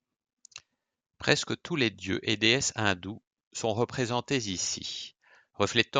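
No technical faults are audible.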